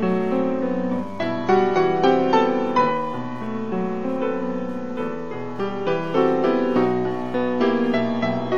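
A Wi-Fi radio sitting close to the audio circuitry is being picked up and rectified for the whole clip, which is Wi-Fi interference. Each beacon the radio transmits, every 102.4 ms, leaves a short click in the signal, so a steady tick just under ten times a second runs beneath the audio from start to finish. The ticking is faint, roughly 45 dB below the wanted sound, and is easiest to hear in quieter passages.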